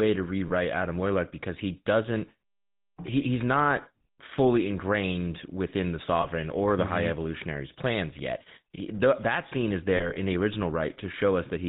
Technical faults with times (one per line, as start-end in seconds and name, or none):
0.00-11.68 GSM full-rate codec
0.48-0.52 lost GSM frames
6.22-6.27 lost GSM frames
9.96-10.17 lost GSM frames